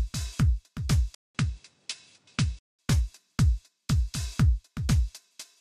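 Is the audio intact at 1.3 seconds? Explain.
No. From 1.15 to 2.79 s the input has likely switched to a poorer device. After a 200 ms gap, the sound turns duller and a few decibels quieter, with nothing above 10.4 kHz and a faint new noise floor. A spectrogram shows a blank column, then a flat ceiling at 10.4 kHz. The waveform shows a flatline, then a smaller envelope.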